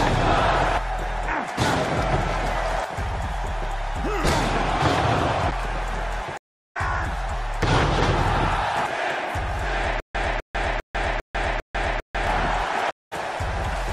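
At 6.37 s the audio drops out for 0.38 s in a stream reconnect. The connection broke, the player went quiet, then started a new decoder partway through the stream. When sound returns at 6.77 s it has jumped ahead by roughly 0.4 s, and it comes back with a brief soft onset instead of a hard cut. Nothing is repeated, which separates it from a stutter. The gap is one silence followed by a skip forward.

From 10.0 s to 12.27 s there is stutter with silent gaps, most likely from the player stalling and replaying its last buffered fragment on each retry. The same 0.25 s burst plays five times on an even 0.4 s cycle, with 0.15 s of digital silence after each one. The identical, evenly timed repeats are what set it apart from a reconnect, and the audio that should have filled this stretch never plays.

A second, shorter stream reconnect cuts in at 12.91 s. It is 0.21 s of silence, and the audio resumes at 13.13 s about 0.15 s further on, again with a soft start and no repetition.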